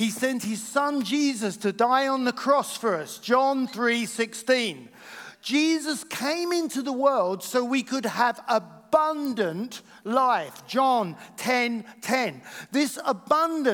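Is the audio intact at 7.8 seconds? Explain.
Yes, at 7.8 seconds the audio is intact, with no dropout, click, distortion or other fault audible at that point.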